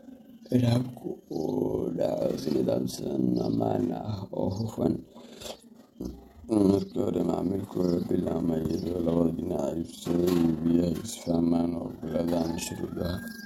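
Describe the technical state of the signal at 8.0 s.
At 8.0 s the speech carries a rough flutter, its level pumping by about 6 dB around twenty times a second, and it runs through the whole clip. This is overlap-add ripple: the frames were rejoined with an overlap whose windows do not sum evenly, so gain dips once per frame.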